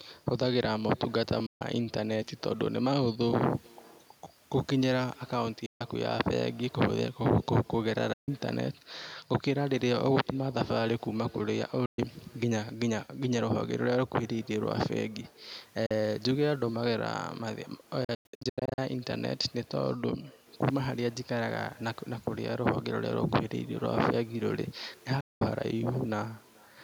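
Bluetooth dropouts break this speech clip into silence at 1.46 s, 5.66 s, 8.13 s, 11.86 s, 15.86 s, 18.04 s and 25.20 s, each gap lasting between about 0.04 s and 0.21 s. From 18.04 s to 18.78 s the holes cluster, cutting out roughly half a second of sound with no single gap longer than 0.1 s. The likely cause is audio packets reaching the headphones too late and being discarded, so playback picks up further along as though it had kept running. Throughout the clip there is also echo with no canceller: a faint, thin copy of every utterance trails it by roughly 0.4 s at about 28 dB below the speech. That delay fits a round trip through the network after the far end's microphone caught its own loudspeaker, and nothing removed it.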